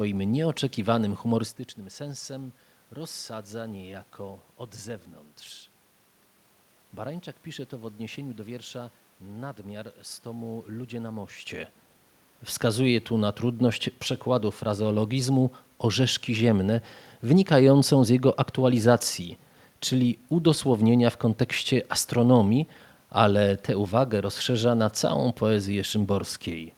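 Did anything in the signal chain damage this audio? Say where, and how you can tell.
No. Nothing in the signal chain damaged this speech.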